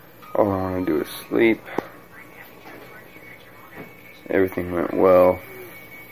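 No audible technical faults in the audio; nothing to flag.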